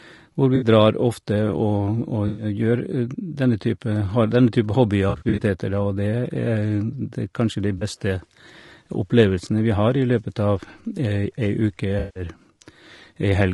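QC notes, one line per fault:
Throughout, low-delay AAC compression: speech sounds rough and grainy, with noise between harmonics and a thin top band, likely AAC-ELD near 32 kbps, whose short frames resolve pitch poorly.
0.55–0.64, 2.27–2.45, 5.09–5.42, 7.78–7.83 and 11.99–12.23 s, AAC frame loss with concealment: the decoder rebuilds missing frames from the last good spectrum, so these are smeared, phasey patches rather than silent gaps. The 5.09 s patch is a spread of short losses.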